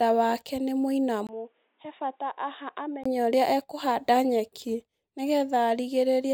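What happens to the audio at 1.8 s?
At 1.8 s the speech sits inside a stretch from 1.27 to 3.06 s where the sound turns dull and boxy. It starts right after "wake nĩ" and clears at "ũrĩa ekũhanda nyeki ni". A brief gap of about 20 ms marks the switch. Nothing is left above 3.8 kHz. The level falls by around 10 dB, and a new noise floor appears some 40 dB down. The likely cause is an input switched to a poorer device, whose narrower band and own character replace the original microphone.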